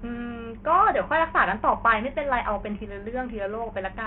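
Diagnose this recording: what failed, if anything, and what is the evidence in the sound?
The codec stage is the likely culprit: this speech has the marks of heavy Bluetooth SBC compression, starved of bits in a way that fits a rate near 48 kbps. Throughout, the upper sub-bands get almost nothing, so treble drops out and flickers, while coarse quantisation leaves gritty noise and aliasing on the remaining sound.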